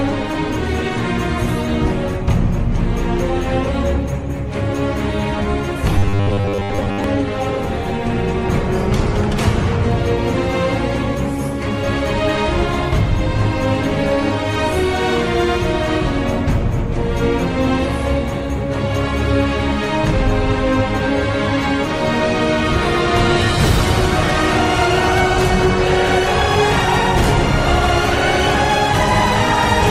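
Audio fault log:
5.98 to 7.04 s, robotic sound from repeated short buffers: the sound collapses into a rigid, metallic buzz fixed at 100 Hz that still loosely tracks the underlying contour. The likely cause is audio arriving too seldom, with the gap filled by looping a roughly 10 ms slice while most of the real material is skipped. Unlike a stutter or dropout, nothing goes silent or audibly jumps back. The steady imposed pitch, set by the loop length, is the tell.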